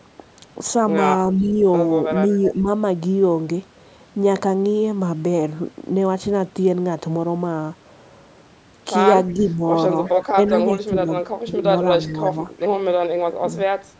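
At 1.39 to 1.47 s, and again at 2.55 to 2.67 s, the voice dips by about 5 dB. This is speech suppressed in double talk, likely from an echo canceller turning everything down while both sides spoke. It is a loss of the main voice itself, not an added sound. Overlapping the first dip, at 1.42 to 1.52 s, and then at 2.45 to 2.52 s, a faint echo leak appears. It is a copy of the voice arriving 355 ms late, about 25 dB and then about 15 dB below the speech, likely residue the canceller failed to remove. From 9.28 to 10.56 s the echo returns at about 20 dB down. Alongside it, from 9.34 to 12.45 s, the voice is cut in pieces totalling about one second, dropping by about 10 dB. Another faint echo runs from 12.05 to 12.68 s. The deepest suppression, about 15 dB, comes at 13.5 to 13.71 s. The delay is what separates the two faults: the echo is an extra trailing copy, while suppression removes level from the voice in real time.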